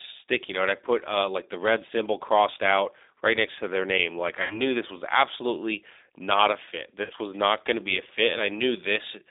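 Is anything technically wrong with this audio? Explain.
Yes. Throughout, the speech sounds thin and slightly rough and synthetic, confined to a telephone band of roughly 300 Hz to 3.7 kHz. This is the G.729 codec at 8 kbit/s, which rebuilds speech from a vocal tract filter, a pitch predictor and sparse pulses, leaving plainly audible coding damage.

At 4.42 to 4.61 s, just before "this was absolutely not", the sound smears into a fading buzzy tone or coloured noise. This is VoIP packet loss concealed by the speech codec. About 80 ms of audio went missing, which fits four lost 20 ms packets, and the decoder extrapolated from its last pitch and filter while lowering the gain. The voice stays weak for a moment after the packets return.

At 7.04 to 7.13 s, between "absolutely not a fit" and "was not going to", the same packet loss concealment recurs. About 60 ms is lost, likely three packets, and the decoder again stretches and fades the last sound before the speech recovers.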